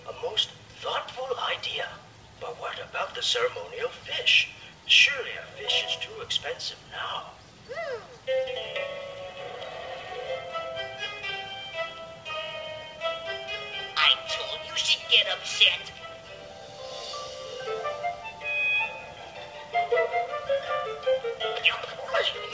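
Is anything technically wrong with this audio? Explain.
No, no technical faults heard.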